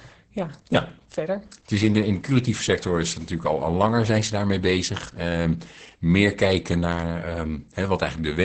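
All the way through, this speech has heavy Opus voice compression: nothing above 8.7 kHz, muffled and hoarse, slightly robotic, which fits SILK running at roughly 10 kbps.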